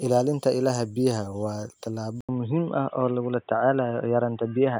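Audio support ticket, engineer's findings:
Speech goes dull and boxy from 2.21 s to end, nothing above 3.8 kHz, level about the same, faint new background noise, brief 80 ms dropout at the change. Likely input switched to a poorer device mid-recording, narrower band and different noise floor.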